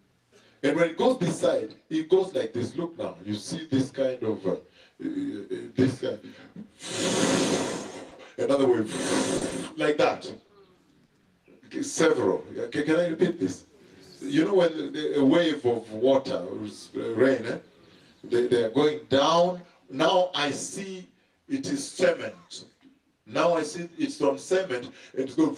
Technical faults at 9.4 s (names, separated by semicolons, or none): short concealed packet loss